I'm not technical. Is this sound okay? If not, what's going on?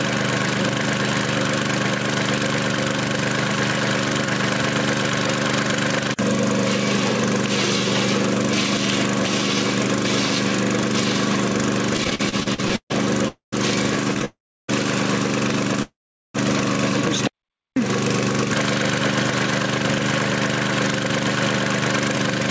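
No, there are a few problems, mostly bunched into the second half.

First, there's gain pumping all the way through. Loud and soft parts end up squashed close together. That effect is likely because the microphone level was set far too high, so a fast automatic limiter keeps yanking it back on every loud sound and letting it rise again afterwards.

Then, from about 11.97 to 12.92 s, you get repeated stalls (stutter). The sound hiccups about a dozen times in under a second, with the longest hold around 140 ms, and over a third of that stretch is the receiver just stretching out what it last had while waiting for the next bit to arrive. There's a shorter, milder burst of the same thing at 14.14 to 14.25 s. Nothing is lost. It just drags and judders.

There are three call audio freezes, at 13.28 to 13.54 s, 14.25 to 14.70 s and 15.82 to 16.36 s. Each time the sound hangs as a fading buzz or hiss, then drops to silence for a moment. 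The longest silent part is roughly 0.4 s, in the last one. When it resumes it picks up right where it stopped, so you hear a pause pushed into the audio rather than a chunk cut out. This is likely network data getting held up on the way and the playback buffer running dry.

Finally, from 17.45 to 17.79 s there's a jitter buffer slow-down. The receiver padded things out by repeating tiny slices of sound to rebuild its reserve, so that stretch plays at about 86% speed with the pitch unchanged. It sounds a bit drawn out and can have a faint warble.

For reference, nothing comes through above 8 kHz, which is just how this kind of call connection carries audio, so that part isn't a fault.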